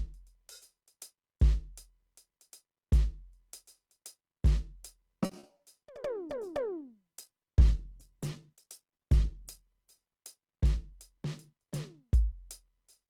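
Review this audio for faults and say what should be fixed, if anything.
From 5.25 to 5.61 s the music turns choppy, with brief holes. This is repeated packet loss: four gaps, the longest 40 ms, arrived in quick succession, and about a third of that stretch was filled by stretching out the preceding sound rather than carrying the real music. Stabilising the network path, or adding forward error correction and redundancy for lost packets, would prevent it.

From 5.97 s the music goes rough, watery and muffled, with the top end dulled, and it stays that way until about 11.17 s. That is a call bitrate drop: the encoder's target fell from 64 kbps to 12 kbps, holding the lowest rate for about 3.4 s. At that rate the encoder quantises coarsely and cuts away the upper frequencies. A higher minimum bitrate and a steadier bandwidth estimate would prevent it.

Between 10.52 and 11.27 s the music rushes slightly, running about 5% fast while the pitch stays put, so the tempo wavers. 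This is a jitter buffer speed-up. The receiver had built up more buffered audio than it wanted and trimmed a few tens of milliseconds in total by cutting out short pitch-period slices one after another. Smoother packet delivery, or a buffer policy that drains more gently during music, would prevent it.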